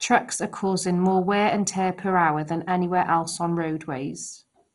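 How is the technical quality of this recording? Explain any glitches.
The quality is poor throughout because of heavy MP2 compression. For the whole clip the speech sounds dull, gurgling and granular. This is likely because MPEG Layer II gave its sub-bands too few bits, which switched off the upper bands and coarsely quantised the rest. The damage fits a rate of around 56 kbps. A spectrogram shows nothing above 11.2 kHz, with upper bands flickering on and off in patches.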